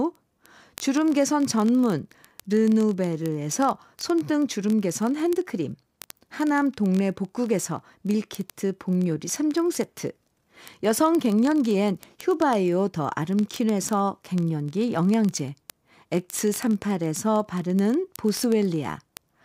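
From 0.11 s to the end, word clock ticks sound as sharp, uneven clicks roughly every 20 ms. They come from an unlocked digital receiver that slips one sample per cycle, which fits a clock error near 1000 ppm.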